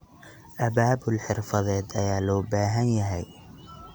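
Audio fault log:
No faults found in the speech.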